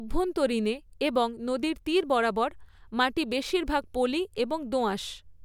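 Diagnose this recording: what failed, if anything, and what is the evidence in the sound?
Nothing failed; no fault is audible in this speech.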